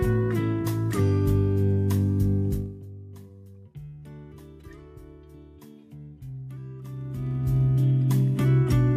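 From 2.5 to 2.86 s the level drops by about 20 dB in 1 dB jumps, roughly fifty a second, producing zipper noise: a fine ticking rides the fade. From 6.82 to 7.64 s it rises about 20 dB at roughly twenty steps a second. Smooth fader moves, by contrast, glide silently.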